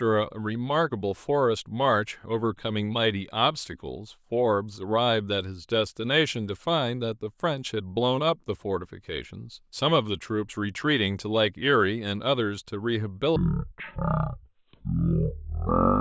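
Playback switches to the wrong sample rate at 13.36 s and stays there to the end: material captured at a rate that fits 44.1 kHz is being clocked out at a rate that fits 16 kHz, with no conversion between them. In this speech clip, the final stretch therefore runs at 0.363 times normal speed and drops about 17.6 semitones, so the voice turns sluggish and deep, with pitch and tempo falling together.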